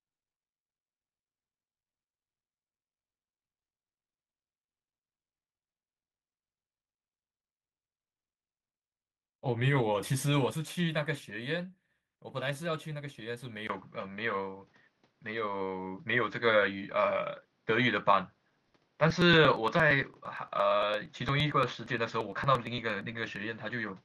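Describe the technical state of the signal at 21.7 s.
At 21.7 s the recording is running on what is likely a poorer input device, a switch that happened at 13.67 s and holds to the end. The system changed its capture source mid-take, leaving a 20 ms gap at the changeover. The new path passes nothing above 6.8 kHz, so the speech sounds dull and boxed-in. The level shifts by about 5 dB, and a fresh noise floor sits about 40 dB below the signal.

The same moment also falls inside a run of periodic USB or driver dropouts lasting from 18.65 s to 23.36 s. Something is stalling the bus or audio driver every 0.115 s, and each stall skips roughly 10 ms of audio outright rather than filling it with silence. Around forty of these losses land in that stretch, heard as a steady, evenly spaced ticking that cuts into the speech only where there is signal to lose.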